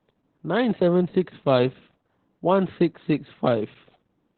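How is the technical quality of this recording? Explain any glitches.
Quality's pretty rough, down to one problem that runs the whole way through: heavy Opus voice compression. The band stops at about 4 kHz, so the speech sounds muffled and phone-like. The SILK coder's coarse excitation makes it hoarse and a bit robotic, which fits a very low bitrate of around 8 kbps.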